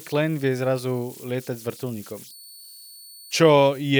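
From start to finish the speech carries converter idle tones. A delta-sigma converter working without dither settles into repeating bit patterns whenever its input is small, and those patterns become a whistle here, around 4 kHz, sitting about 25 dB below the speech. Unlike mains hum, which holds a fixed low pitch, this tone is high and rides on the input's offset, so it whistles in pauses and turns grainy under quiet passages.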